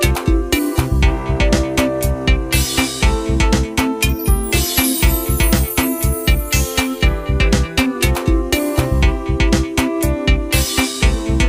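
Listening closely to the audio, nothing stood out as a technical fault at any point.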